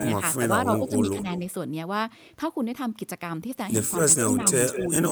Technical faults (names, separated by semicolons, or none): speech suppressed in double talk; echo leak